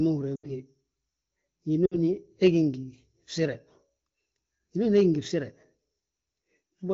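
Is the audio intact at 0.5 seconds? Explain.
No. From 0.36 to 0.51 s the sound drops to near silence within two frames, and at 0.5 s it is just recovering, coming back weak or rough. These are lost AMR speech frames: a gap of about 80 ms, which fits four 20 ms frames, failed its checks, so the AMR-WB decoder held the last good pitch and vocal tract settings while ramping the gain down, then eased back in.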